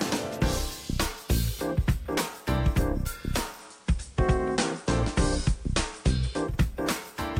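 At 3.51 s the digital radio blends to analogue FM over 158 ms, holding until 6.58 s: level shifts about 1 dB, and hiss rises to roughly 30 dB below the signal, because the receiver fell back to the analogue broadcast.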